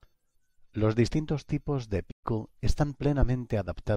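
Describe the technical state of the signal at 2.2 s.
At 2.2 s you're right inside a playback stall: just after "distintos tipos de" the speech cuts to silence from about 2.11 to 2.25 s, a gap of roughly 120 ms, then picks up again. That's most likely the player starving for data or its thread getting blocked briefly.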